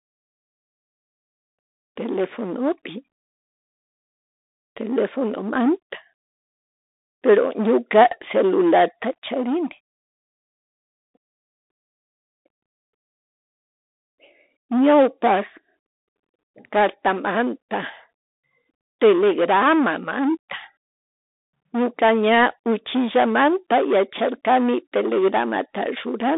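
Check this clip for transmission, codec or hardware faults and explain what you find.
One codec fault runs through the whole clip. A Bluetooth CVSD headset codec, which fits a 64 kbit/s one-bit delta stream, narrows the speech to 250 Hz to 3.7 kHz, with nothing above 3.8 kHz. The result is boxy, distorted speech, scratchy s sounds and granular hiss.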